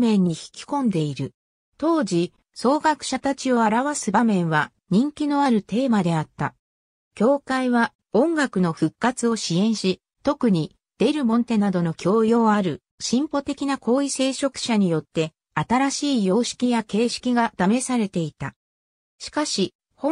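Nothing stood out on listening to the audio; no technical problem could be heard at any point.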